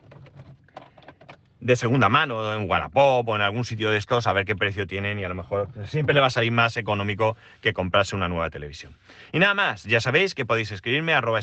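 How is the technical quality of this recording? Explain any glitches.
No glitches are audible; the speech has passed through a call codec whose band limit sits around 8 kHz, carrying the usual coding texture of that path.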